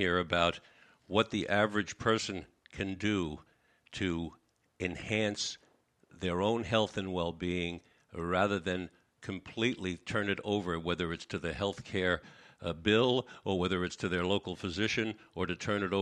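Nothing in the recording stood out as a technical problem on listening.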